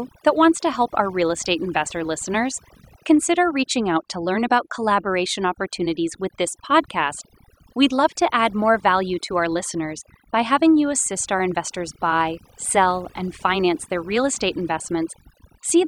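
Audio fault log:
Throughout, overdone noise removal: the denoiser was pushed too hard, so bands near the noise floor get gated out, leaving twinkly near-silence and taking quiet parts of the voice with them.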